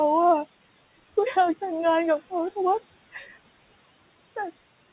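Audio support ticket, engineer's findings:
Noise suppressor artifacts, whole clip: suppressor pulling noise-classified bands down about 19 dB frame by frame against room noise sitting about 17 dB under speech. Result: background drops in gaps, returns under speech. Band edge at 4 kHz, consistent with a narrowband mu-law call path.

Speech cut by the noise suppressor, 3.12 to 3.36 s: gain estimate misread low-level speech as noise and attenuated it with the background, up to about 13 dB, for roughly 0.2 s of audio in that span. Result: the soft portion sounds swallowed and faint.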